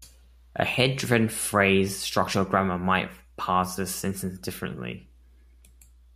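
From start to finish, mains hum sits under the speech: a steady 60 Hz tone with some low harmonics, roughly 30 dB down, from power-line coupling such as a ground loop. Unlike broadband rumble, it holds one fixed pitch and never drifts.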